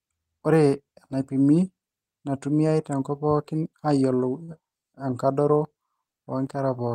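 At 4.43 s a packet arrives too late and the jitter buffer runs dry, causing a short stall from a late packet that lasts until about 4.50 s. The receiver fills the gap by stretching the last sound for about 49 ms, then resumes from exactly where it stopped, so no speech is lost. The held sound comes across as a brief drawn-out moment with a faint buzz or dip, and everything after it plays 49 ms later than before.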